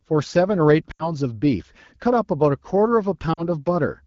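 Lost AMR speech frames at 0.91 to 1.13 s and 3.34 to 3.46 s: the wideband decoder fills roughly 80 ms, then 40 ms, by repeating the last pitch and vocal tract settings at falling gain. The sound drops to near silence and returns briefly rough.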